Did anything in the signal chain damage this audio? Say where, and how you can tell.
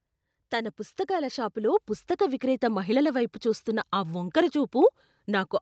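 Yes. Automatic gain rising, 0.36 to 2.73 s, at the call-processing stage: the AGC judged the input too quiet and swelled speech and background together by about 6 dB before "మహిళల వైపు చూస్తున్న ఆ".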